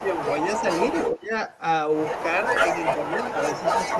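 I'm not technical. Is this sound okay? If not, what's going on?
No. The speech briefly dips or fades at 0.00–0.07, 0.61–0.65, 1.09–1.26, 2.94–3.35 and 3.85–3.98 s. This is likely speech suppressed in double talk: the echo canceller mistakes overlapping talk for echo and turns it down.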